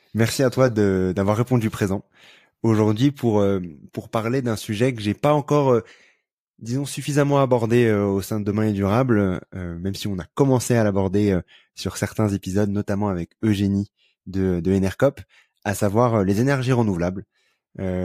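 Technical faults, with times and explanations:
10.62 s and 15.79 s, dropped samples: two sharp single clicks, likely from a fraction of a millisecond missing, making a waveform step and thin vertical spectrogram line.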